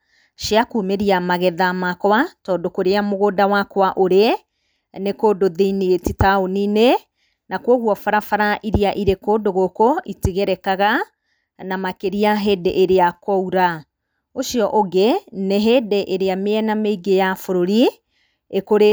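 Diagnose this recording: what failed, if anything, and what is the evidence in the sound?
Nothing in the chain has failed: the speech arrives continuous and intact, and nothing in the sound points to trouble at any stage from the wiring through to playback.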